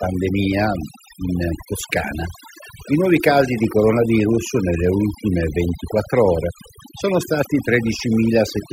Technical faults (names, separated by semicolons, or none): overdone noise removal